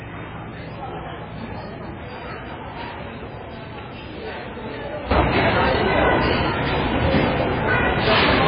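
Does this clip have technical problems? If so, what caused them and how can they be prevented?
Yes. Throughout, the audio sounds watery and swirly, with nothing above 5 kHz; heavy MP3 compression is the likely cause, pointing to a very low bitrate of around 16 kbps. On a spectrogram the energy stops at a flat ceiling near 5 kHz, with blotchy patches flickering on and off. Encoding at a higher bitrate prevents it.

At 5.11 s the level suddenly rises by about 12 dB and stays there to the end, with the background noise jumping along with it. This sudden gain jump most likely comes from a gain change applied without a ramp. The waveform shows a vertical step in amplitude at that point. Smoothing gain changes over a few milliseconds prevents it.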